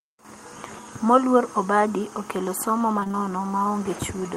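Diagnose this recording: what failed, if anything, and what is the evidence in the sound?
The fault is in the network. Just after "obadi okelo somo", from 2.99 to 3.15 s, the speech turns choppy. It sounds like repeated packet loss. About four holes, each up to 20 ms, are patched by stretching the last sound, so roughly half that span is concealed.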